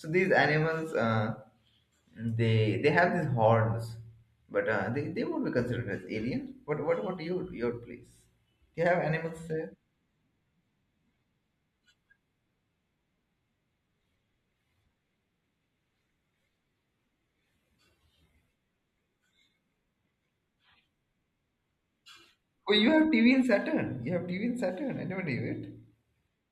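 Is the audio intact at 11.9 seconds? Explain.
Yes, the speech at 11.9 seconds is intact, with no audible dropout, click, distortion or other fault at that point.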